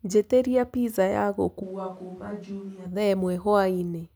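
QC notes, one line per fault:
1.64–2.84 s: switch to a distant microphone. The speech turns abruptly roomy and hollow, with thinner bass, a level about 10 dB lower and room noise roughly 25 dB below the speech. The close microphone likely dropped out, leaving a farther pickup, before cutting back suddenly.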